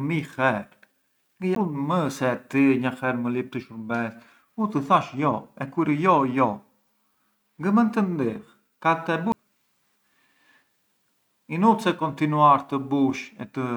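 Speech with two CD skips, at 1.55 s and 9.32 s. At each, the laser jumps to a different turn of the disc's spiral, leaving a tick and a very brief mute before playback resumes elsewhere. Unlike a simple dropout or click, the speech continues out of sequence.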